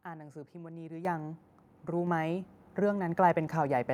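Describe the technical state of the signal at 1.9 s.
A tiny flat hold at 1.88 s, about 1.3 ms long, resuming softly: an underrun with held sample, the converter freezing its last value until data returned, with no audio lost.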